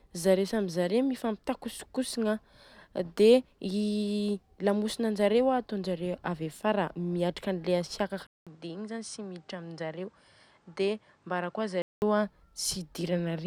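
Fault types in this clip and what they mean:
Input switched to a poorer device: from 8.27 to 12.02 s the speech turns duller, with nothing above 10 kHz, a level drop of around 5 dB and a new background noise some 35 dB down, after a 200 ms gap at the switch, likely a change of microphone.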